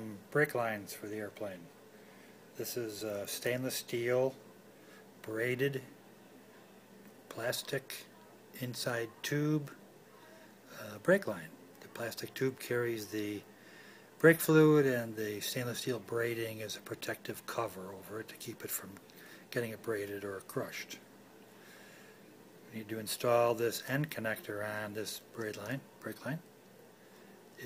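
No technical faults can be heard anywhere in the audio, and the signal holds steady throughout.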